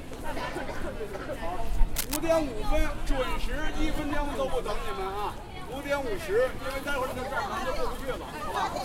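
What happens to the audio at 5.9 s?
Nothing goes wrong at 5.9 s; the audio there is intact, with no dropout, click, distortion or other fault.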